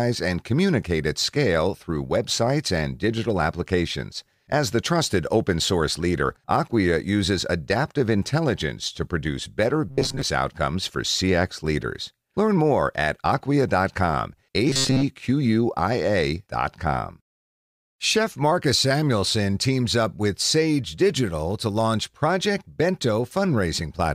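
Speech with robotic sound from repeated short buffers at 9.89–10.22 s, between "intelligence to produce better" and "outcomes for", and again at 14.70–15.04 s. A metallic buzz fixed at 134 Hz replaces most of the voice, likely from a roughly 7.5 ms buffer looping. The spectrogram shows rigid harmonic stripes, and the waveform shows identical repeating cycles.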